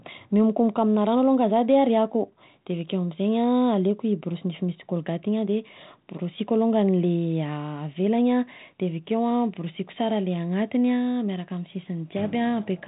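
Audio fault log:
Nothing to log here; this speech has no faults, just the narrow telephone band of G.726 coding at 32 kbit/s.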